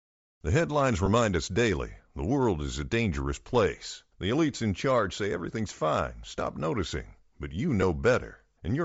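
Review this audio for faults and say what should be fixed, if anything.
Bluetooth LC3 compression runs throughout the speech. The upper spectrum is thinned and replaced with noise fill, giving a breathy, grainy edge, which fits a low bitrate around 32 kbps with 10 ms transform frames. This is likely due to an LE Audio link negotiating a low-quality setting.

Lost LE Audio frames occur at 1.06 s and 7.82 s. Each is a brief 10 ms blip where the decoder repeats the previous spectrum with scrambled signs, producing a short noisy smear instead of a clean continuation.

To prevent both, configure the LE Audio link for a higher LC3 bitrate and improve radio conditions, through shorter range, less interference or more retransmissions, so frames arrive intact.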